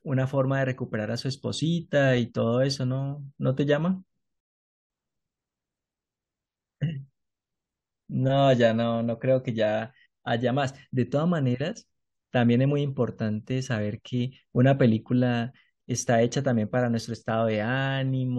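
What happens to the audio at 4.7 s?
A rebuffering stall: from 4.40 to 4.90 s playback ran dry and went silent, then resumed exactly where it stopped, adding 0.5 s rather than losing speech.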